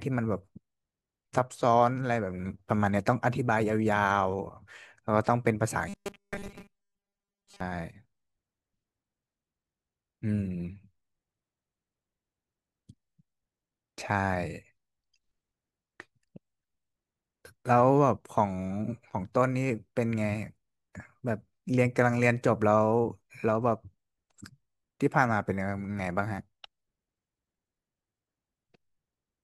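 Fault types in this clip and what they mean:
Robotic sound from repeated short buffers: from 5.89 to 7.60 s, speech becomes a rigid metallic buzz at 200 Hz, likely from the last 5 ms being repeated over most of that stretch.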